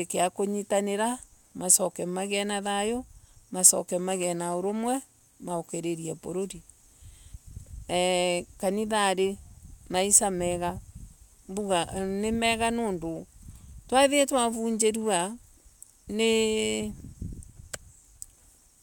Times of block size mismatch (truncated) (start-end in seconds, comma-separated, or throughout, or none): 3.98-5.51